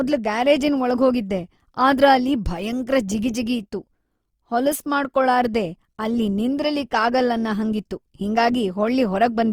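Throughout the speech, Opus compression damage is plainly audible. Bands starved of bits are filled with folded or noise content, so the sound turns grainy and rough rather than swirly. Energy still reaches 20.2 kHz. This likely fits Opus music mode near 24 kbps.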